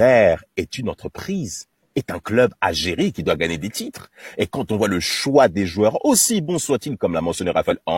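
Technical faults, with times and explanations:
7.67–7.73 s, compressed frames skipped: near the end of the speech, about 50 ms of audio vanishes because whole compressed frames were lost or rejected by the decoder as damaged, so the sound jumps ahead.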